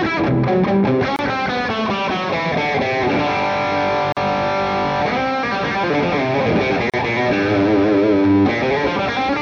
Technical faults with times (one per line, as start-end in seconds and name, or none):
1.16-1.19 gap at a join of encoded pieces
4.12-4.17 gap at a join of encoded pieces
6.90-6.94 gap at a join of encoded pieces